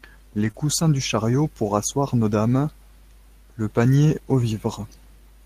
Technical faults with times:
0.39-0.62 lost packet rebuilt from error correction
0.51-0.56 short concealed packet loss
1.44-1.46 lost packet rebuilt from error correction

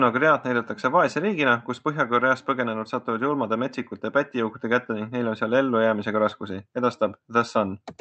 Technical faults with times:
none

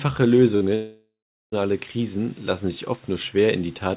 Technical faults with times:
0.56-0.63 burst of packet loss
0.75-1.54 long network dropout

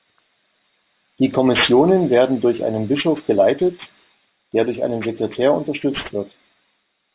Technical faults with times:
0.00-7.14 aliasing

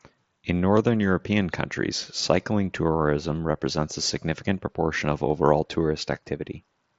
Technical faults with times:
none

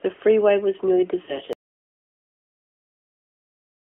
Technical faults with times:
1.26-1.34 lost AMR speech frames
1.53-3.96 audio dropout to silence

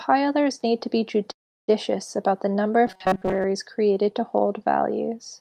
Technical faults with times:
1.31-1.70 call audio freeze
2.87-3.45 robotic sound from repeated short buffers

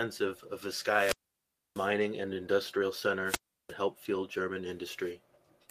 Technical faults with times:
0.85-1.94 wireless microphone squelch dropout
3.24-3.75 wireless microphone squelch dropout

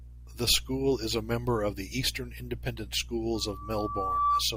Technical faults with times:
3.35-4.44 loudspeaker feedback squeal

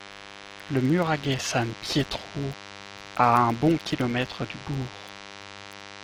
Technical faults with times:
0.00-6.04 DECT cordless phone buzz
0.00-6.04 filter restarted on every block

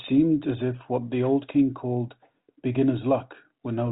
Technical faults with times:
none

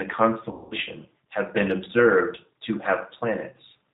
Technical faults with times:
0.00-3.93 G.729 codec
0.51-0.74 VoIP packet loss concealed by the speech codec

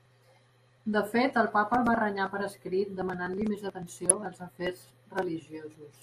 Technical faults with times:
0.00-6.03 MP2 compression
1.75-1.89 DAB burbling
4.09 DAB burbling

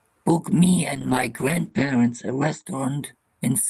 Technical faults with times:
0.96-2.71 call bitrate drop

